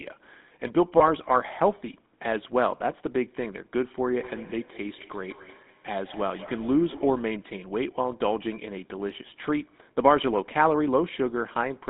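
GSM full-rate codec coloring runs through the whole recording. The coder models the vocal tract and excites it with sparse, regular pulses, which gives the speech a buzzy, gravelly grain. The band is narrowed to roughly 200 Hz to 3.7 kHz, consistent with the 13 kbps full-rate coder.

Lost GSM frames cause a brief fault from 0.98 to 1.01 s. One 20 ms frame failed, and the decoder filled it by repeating the last good frame's parameters. This leaves a short, rough, metallic ring instead of a gap.

Feedback echo between two devices runs from 4.19 to 7.37 s. One device plays what the other's microphone sent, and that microphone picks it up again. Its echo canceller cannot remove sound from the other device. Each phrase returns at intervals of about a fifth of a second, thinner and ringier each time, peaking at about 20 dB below the speech.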